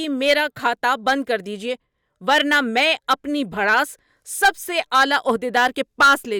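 No technical faults can be heard anywhere in the speech recording. Listening through, no moment stands out as a fault.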